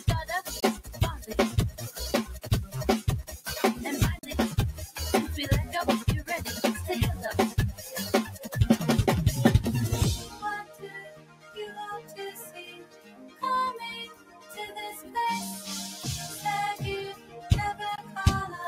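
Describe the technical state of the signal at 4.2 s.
At 4.19 s the signal cuts out and returns at 4.23 s. About 37 ms of audio is missing. The sound resumes further along, as if it had kept playing through the gap. This is likely a Bluetooth dropout. Packets failed to reach the headphones in time and were discarded, so the output fell silent until good data arrived. A gap of this length fits two lost packets.

A noise suppressor applied to music or sounds is also active here, as it is across the whole clip. It treats sustained tones, ambience and decay as noise and pulls them down. Attacks pass, while held sound and tails sink by around 10 dB.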